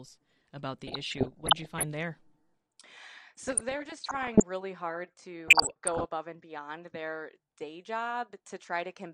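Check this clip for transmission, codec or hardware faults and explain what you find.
There are two problems here: a dull, gurgly coding sound all the way through, and three bursts of DAB burbling on top of it.

The whole clip sounds muffled and granular, with top end that flickers in and out. That's likely MP2 compression at a low rate, around 80 kbps by the sound of it, where upper sub-bands get starved of bits and switch off while the remaining ones are quantised coarsely.

The DAB burbling comes in at 0.87 to 1.83 s, 3.42 to 4.42 s and 5.46 to 6.08 s. Bit errors, somewhere near 0.7% in the first two bursts and 1% in the third, slip past error correction and corrupt sub-band samples and scale factors, so individual bands jump in level frame by frame. You hear burbling blips of noise over the speech.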